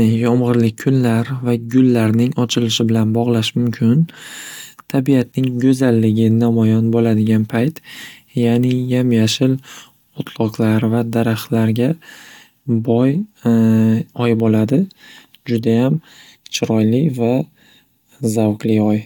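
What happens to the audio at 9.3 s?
Nothing goes wrong at 9.3 s; the speech runs through that moment intact, with no dropout, click or distortion to be heard.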